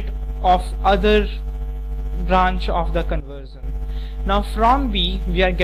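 At 3.20 s the level drops abruptly by about 12 dB and stays down until 3.63 s, where it returns just as suddenly. This is a sudden gain jump: the sound and its background noise fall together in a single step, with no fade in or out at either edge. The likely cause is a digital gain change applied from one sample to the next, such as a setting update or bit shift made without a ramp and then reversed.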